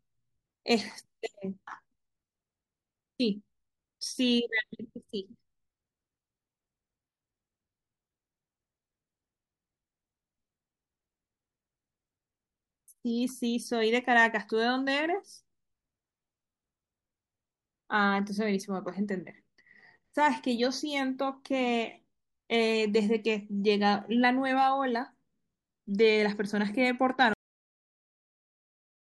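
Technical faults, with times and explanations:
27.34 s, cut-off end: speech stops mid-sound because its final buffers never played; the waveform drops straight to flat digital silence, and the spectrogram goes blank, without decay.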